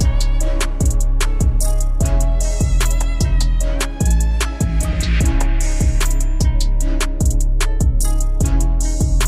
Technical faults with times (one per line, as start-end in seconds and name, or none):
none